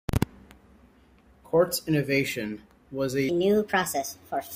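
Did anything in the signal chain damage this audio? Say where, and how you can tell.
Yes: a section at the wrong speed runs from 3.29 s to the end at 4.56 s, right after "innovation was a". The speech jumps to 1.36 times speed and rises about five semitones together, likely from a playback or editing stage resampling that stretch against the wrong clock.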